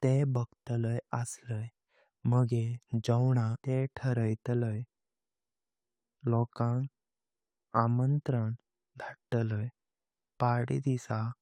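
At 3.54 to 3.56 s, a stream segment was likely skipped: one segment failed to load, so the speech jumps abruptly ahead with a brief blip at the join.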